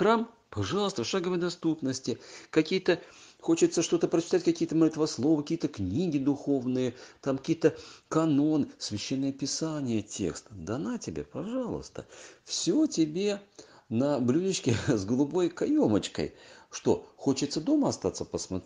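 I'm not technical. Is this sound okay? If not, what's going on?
Yes, this sound is okay, and nothing in it points to a technical problem. There's nothing here that needs fixing.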